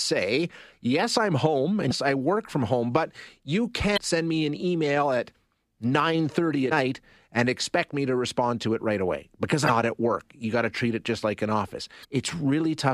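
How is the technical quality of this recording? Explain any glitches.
The speech is marred by five short glitches, each about 40 to 45 ms long, heard as a chirp, squawk, click or short hole: at 1.87 s, at 3.93 s between "from home but you" and "send me an email", at 6.68 s before "and expect me to", at 9.66 s between "it right away because" and "at work", and at 12.01 s. These come from damaged data in a compressed stream. Corrupted bytes make the decoder misread frames, lose sync and skip ahead to the next valid header.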